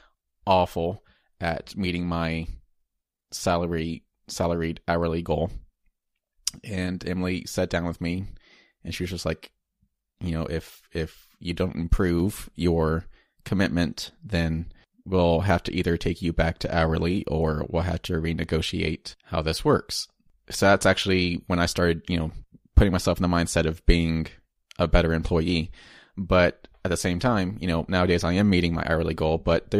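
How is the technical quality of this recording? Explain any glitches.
Nothing in this speech recording stands out as a glitch; there's no dropout, click or other technical hiccup to flag at any point.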